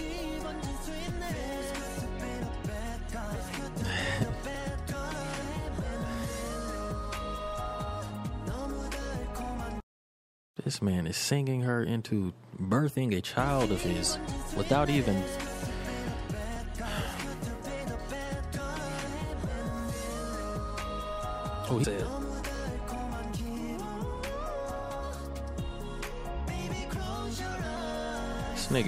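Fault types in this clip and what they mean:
Overlapping chunks: A small click or stutter arrives at a steady beat, at 4.55, 10.56, 16.56, 22.44 and 28.34 s, roughly 6 s apart. At each one, about 6.5 ms of sound plays twice. This fits audio handled in 6-second blocks where each new block begins slightly before the previous one finished, so the overlap repeats at every join and the regular spacing gives the fault away.
Compressed frames skipped: At 21.83 s and again at 27.76 s the sound lurches forward with a short, smeared blip rather than a sharp click. Roughly 150 ms of material goes missing at the first point and about 100 ms at the second. The gaps fit the loss of a handful of whole 26.1 ms codec frames, either absent or rejected by the decoder, and the frames' overlapping windows blur each join.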